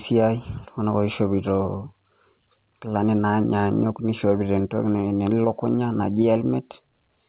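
Nothing goes wrong anywhere in this speech, and the only thing to note is the call path it came through, where the sound stops at 4 kHz in the narrowband way you'd expect from a G.711 A-law telephone codec.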